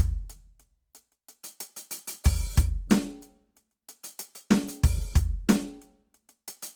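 Throughout the music, tones sound grainy, rough and noisy rather than swirly, with the full bandwidth held up to about 20.4 kHz. That points to Opus compression, likely in its music mode at a low rate near 24 kbps, where empty bands are filled with folded or noise-like content.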